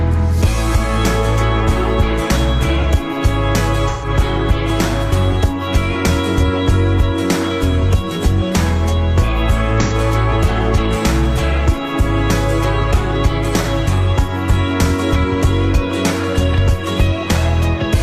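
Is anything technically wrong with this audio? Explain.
Yes. There are three short dropouts from AAC frame loss with concealment, at 3.89 to 4.08 s (128 ms, consistent with about three lost 43 ms frames), 9.82 to 9.94 s (85 ms) and 13.62 to 13.68 s (43 ms). At each gap the decoder rebuilt the missing audio from the last good spectrum, so these patches sound smeared, noisy or phasey. On a spectrogram each gap appears as a blurred, texture-less block without fine detail. The waveform loses its normal structure across the gap.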